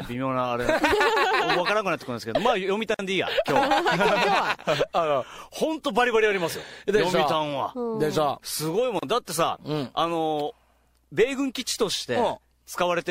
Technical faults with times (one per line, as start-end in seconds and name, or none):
2.94-2.99 gap at a join of encoded pieces
8.99-9.03 gap at a join of encoded pieces